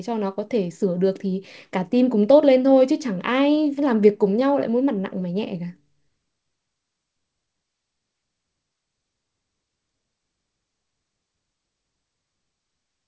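Between 3.15 and 4.43 s the speech carries scattered short gaps: around seven tiny packet losses, each no longer than about 15 ms, which the receiver covered by stretching the preceding sound forward. What you hear are brief ticks and small smears dotted through the stretch, while the speech itself stays clear. Because each hole is isolated and very short, this differs from a burst loss, which leaves one longer buzzy or muted patch.

Overlapping its tail, from 4.34 to 5.22 s, comes a jitter buffer slow-down. The buffer was running low or had just raised its target delay, so the receiver built up its reserve by repeating single pitch periods and slivers of pause. That adds about 50 ms and plays the speech at roughly 95% speed. The sound is drawn out, but the pitch does not drop. A tape-style slowdown would lower the pitch along with the tempo. The G.722 call path under all of this limits the band to nothing above 8 kHz.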